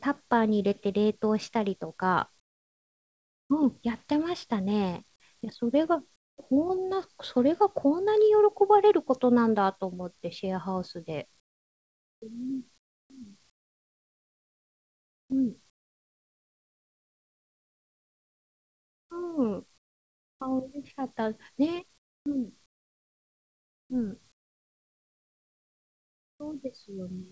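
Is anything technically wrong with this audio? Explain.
Yes. In the pauses at 2.4–3.5 s, 6.16–6.38 s, 11.4–12.22 s, 12.78–19.1 s, 19.78–20.4 s and 21.98–26.4 s, the background gives way to a smooth, featureless hiss, about 22 to 25 dB quieter where it can be compared. This is comfort noise in place of the background, likely from the sender's discontinuous transmission: when its detector finds no speech it stops sending audio, and the receiver synthesises roughly matched noise until speech returns. The band tops out at 8 kHz, which fits a wideband call codec.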